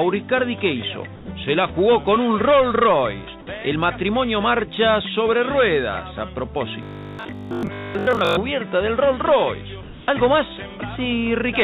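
From 1.16 to 1.28 s, the background briefly goes flat: for about 120 ms its texture is replaced by a steady, featureless hiss about 4 dB quieter, before the sound resumes. The background sits about 19 dB below the loudest passages. This is comfort noise in place of the background, likely from discontinuous transmission: the sender stopped sending during what its voice detector judged a pause, and the receiver filled the gap with synthetic noise.

From 6.83 to 8.37 s, the sound turns rigid and metallic, with a fixed buzz at 50 Hz that roughly tracks the original but loses its natural movement for most of that stretch. This is robotic sound from repeated short buffers, likely caused by audio arriving too seldom, so the receiver looped the last 20 ms repeatedly while skipping the real signal. That repeat length sets the 50 Hz pitch.

From 9.83 to 10.07 s, comfort noise replaces the background again, this time for about 240 ms. 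The smooth synthetic hiss is only about 1 dB quieter than the real background, which here lies about 22 dB below the loudest parts. The level step is smaller than at 1.16 s, and in this call path nothing is carried above 4 kHz.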